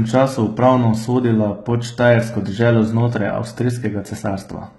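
Throughout the speech, the signal has likely passed through HE-AAC compression at a very low bitrate, consistent with roughly 16 kbps. Only the lower spectrum is properly coded; the treble is rebuilt by copying lower bands upward under a coarse envelope, and nothing survives above 11.8 kHz. The damage is heavy: sibilants sound gritty and lispy, with a metallic sheen where the synthetic upper band fails to match the real harmonics below it.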